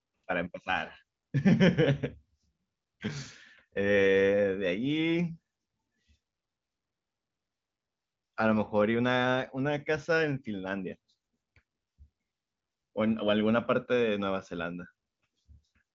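Nothing's amiss in this bit of speech, which comes through the AMR wideband (HD Voice) codec at 23.05 kbit/s with nothing above 7.5 kHz, just as that codec's bandwidth would have it.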